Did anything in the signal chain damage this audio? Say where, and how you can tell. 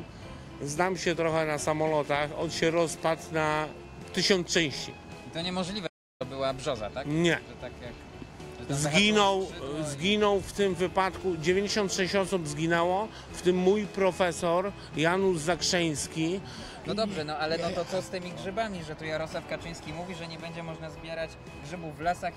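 Yes. An audio dropout to silence runs from 5.87 to 6.21 s, losing about 0.33 s. The sound stops mid-flow and resumes abruptly. The waveform flattens to silence with no room tone, a blank band on the spectrogram, likely from a lost input link while recording continued.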